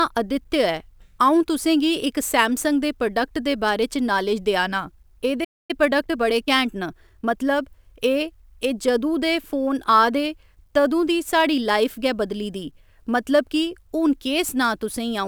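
At 5.44 s the player most likely ran short of buffered data or had its output thread blocked, producing a playback stall: the speech cuts off mid-flow and the output goes silent for about 0.25 s, resuming at 5.71 s.

From 5.71 to 7.35 s the player works off its backlog with time-compressed catch-up, splicing out small slices and cross-fading the joins. Speech runs about 1.15 times faster at unchanged pitch, sounding hurried.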